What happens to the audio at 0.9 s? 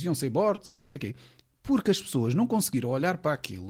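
From 0.65 to 0.97 s, a fading buzz replaces the speech. Likely a long network dropout: the receiver stretched the last sound, and that audio is lost.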